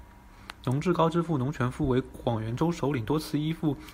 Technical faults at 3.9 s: none

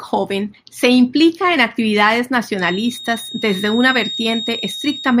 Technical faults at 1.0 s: none

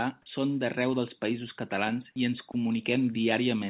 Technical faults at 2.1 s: sound dropped by the voice detector

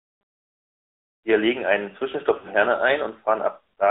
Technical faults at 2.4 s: AMR narrowband mobile codec; lost AMR speech frames

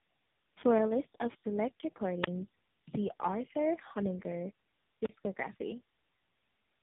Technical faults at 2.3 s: tandem speech coding; wireless microphone squelch dropout

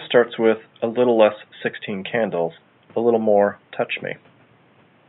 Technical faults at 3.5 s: none

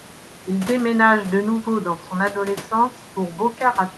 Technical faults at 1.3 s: none

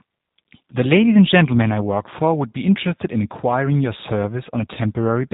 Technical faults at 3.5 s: G.729 codec

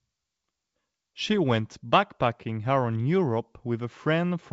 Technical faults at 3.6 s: none

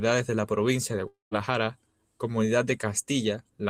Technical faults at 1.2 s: long network dropout

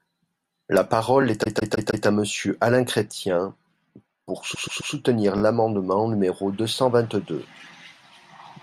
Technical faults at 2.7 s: none

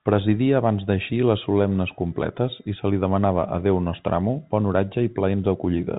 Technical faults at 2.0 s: none

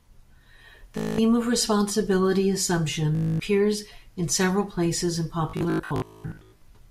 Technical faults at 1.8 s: none

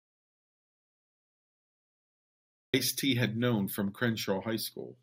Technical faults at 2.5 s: audio dropout to silence

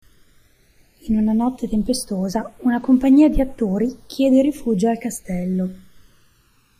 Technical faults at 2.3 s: channels drifting apart

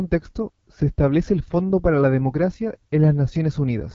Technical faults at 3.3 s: AMR wideband (HD Voice) codec

